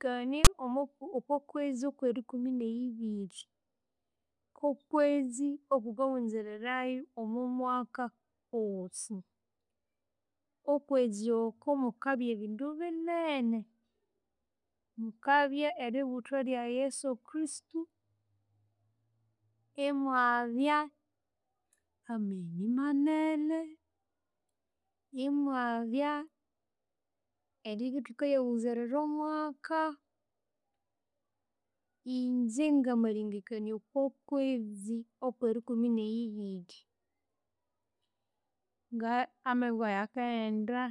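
A block of text tags in the file was decoded as if it were audio samples, so from 0.45 to 0.47 s the speech is interrupted by file tags played as audio: a brief, loud, hard-edged rasp of static, pushed off-centre by the byte values.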